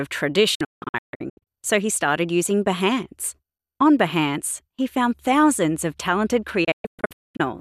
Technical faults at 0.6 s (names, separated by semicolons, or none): digital broadcast dropout